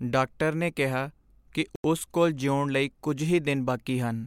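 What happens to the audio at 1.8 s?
The speech drops to silence for about 87 ms, from 1.76 to 1.84 s, then continues: likely a Bluetooth stall, where delayed packets left the headphones' buffer empty.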